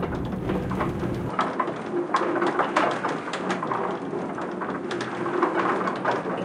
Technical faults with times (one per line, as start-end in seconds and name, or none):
1.29-6.45 input switched to a poorer device